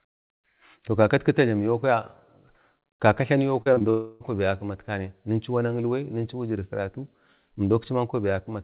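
From 3.62 to 3.86 s the sound turns choppy. This is repeated packet loss (robotic sound): four short holes, the longest about 38 ms, each patched by stretching the preceding sound. Together they cover roughly 42% of that stretch, about 0.1 s lost. Unlike a single dropout, the holes are brief and the real audio keeps breaking through between them.

Just after, from 3.90 to 4.22 s, a continuous smeared buzz replaces about 0.3 s of audio, with no silent gap before the sound resumes with that part gone. A long network dropout is the likely cause. It differs from the earlier stretch in being one unbroken synthetic fill rather than rapid alternation, heard through a G.711 mu-law call path that carries nothing above 4 kHz.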